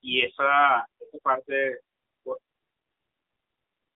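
Throughout, the speech sounds thin, boxed-in and plainly buzzy, with a synthetic edge and nothing above about 3.8 kHz. This is the AMR narrowband mobile codec. Its vocal-tract model runs at a low mode that fits roughly 8 kbps, and the speech is squeezed into a 250 Hz to 3.6 kHz phone band.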